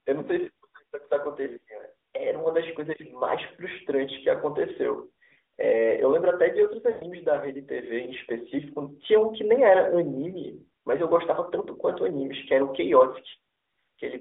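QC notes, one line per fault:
6.90–7.05 s, 10.30–10.37 s, 13.30–13.35 s, lost AMR speech frames: corrupted frames were discarded, and the decoder filled each gap by repeating its last good pitch and vocal-tract settings at falling gain. The longest gap, about 120 ms (consistent with six 20 ms frames), stretches into a drawn-out tone that sags toward silence. The 20 ms gap comes across as a brief dip or warble, and the 40 ms gap as a short drawn-out stretch. Each is followed by a moment of weak, rough sound as decoding recovers.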